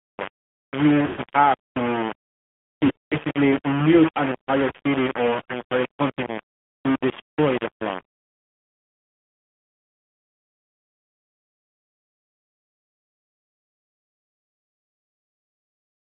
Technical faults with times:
0.00-16.11 low bit depth without dither
0.00-16.11 AMR narrowband mobile codec
1.06-1.21 lost AMR speech frames
2.86-3.37 lost AMR speech frames
5.44-5.53 lost AMR speech frames

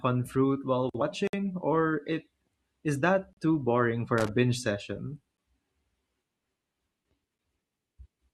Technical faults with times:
1.27-1.33 gap between stream segments
3.33-3.37 gap between stream segments
4.18-4.28 loose connector crackle
5.37 gap between stream segments
7.38 gap between stream segments

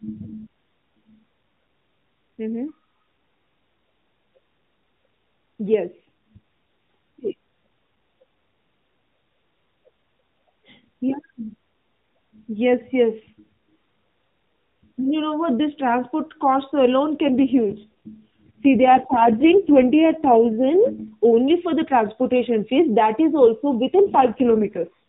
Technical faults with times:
17.26-21.15 AMR rate drop
23.94-24.98 AMR rate drop

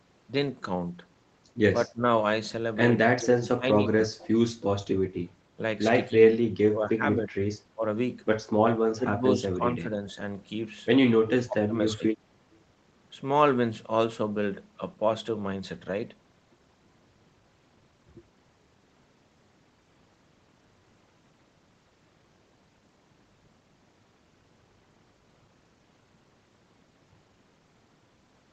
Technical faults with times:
1.88-2.04 speech suppressed in double talk
3.17-4.44 speech suppressed in double talk
6.08-6.35 speech suppressed in double talk
6.68-7.34 speech suppressed in double talk
7.74-7.84 speech suppressed in double talk
8.96-10.18 speech suppressed in double talk
11.15-12.02 speech suppressed in double talk

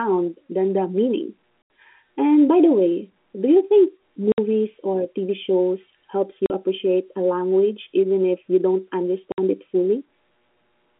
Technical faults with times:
1.62-1.70 packet loss filled with silence
4.32-4.38 packet loss filled with silence
6.46-6.50 packet loss filled with silence
9.32-9.38 packet loss filled with silence

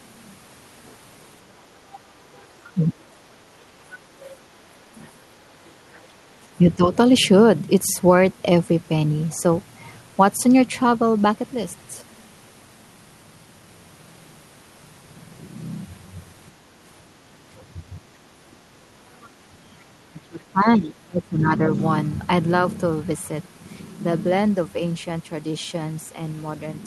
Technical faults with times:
1.95-2.86 other side's voice leaking through
2.72-2.83 speech suppressed in double talk
3.92-6.01 other side's voice leaking through
5.09-5.14 speech suppressed in double talk
6.08-6.92 speech suppressed in double talk
17.60-19.28 other side's voice leaking through
19.50-21.69 speech suppressed in double talk

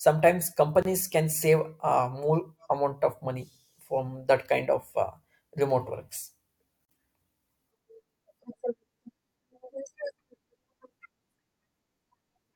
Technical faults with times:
0.82-0.85 gap at a join of encoded pieces
6.85-6.89 gap at a join of encoded pieces

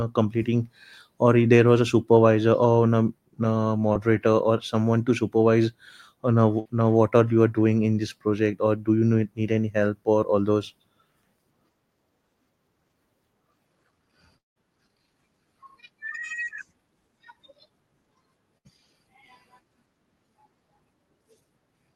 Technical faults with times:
3.93-3.97 short concealed packet loss
6.59-6.67 burst of packet loss
14.38-14.58 long network dropout
18.58-18.67 burst of packet loss

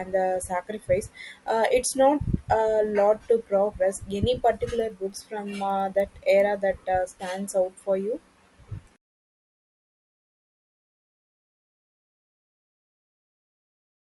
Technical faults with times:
4.70-6.40 resampler restarted on every block

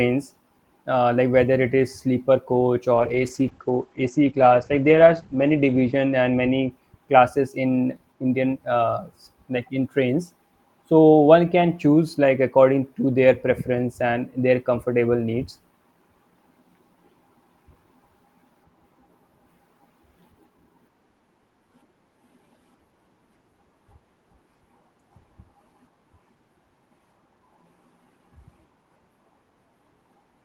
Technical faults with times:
2.95-7.03 call bitrate drop

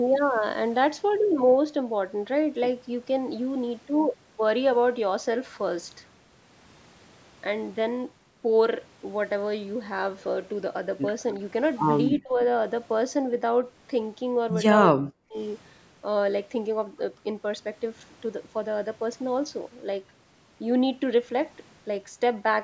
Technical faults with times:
12.11-12.40 speech suppressed in double talk
14.95-15.38 speech suppressed in double talk

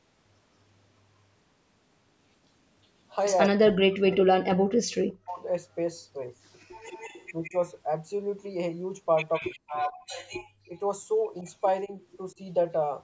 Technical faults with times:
3.48-5.44 speech suppressed in double talk
4.11-4.16 echo leak
6.80-7.61 echo leak
7.49-7.54 speech suppressed in double talk
9.33-12.35 echo leak
9.39-12.41 speech suppressed in double talk
9.92-10.09 background gated by the echo canceller

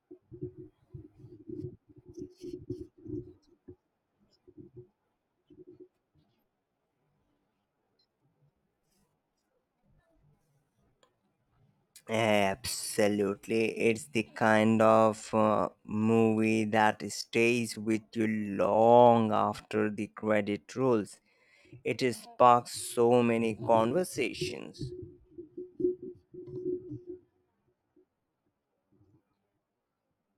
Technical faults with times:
6.08-30.37 time-stretched section

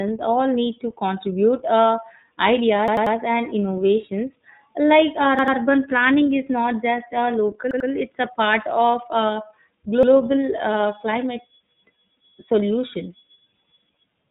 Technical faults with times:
0.00-14.31 iLBC codec
2.88-3.16 repeated buffer
5.39-5.57 repeated buffer
7.71-7.89 repeated buffer
10.03-10.12 repeated buffer

